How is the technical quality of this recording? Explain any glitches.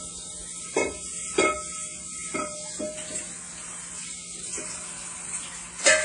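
The technical quality is noticeably degraded, with plainly audible lossy-codec damage running through the whole recording of sounds.

Throughout, the sound rings and turns washy, with a hiss that swells and fades along with the signal. This is likely WMA compression at a low bitrate, which fits roughly 32 kbps. Long transform blocks smear quantisation noise over tens of milliseconds, and weak spectral lines are discarded. On a spectrogram, sharp onsets show pre-echo smudges before them, and the upper bands break into patchy, flickering islands with empty gaps. The waveform looks largely ordinary.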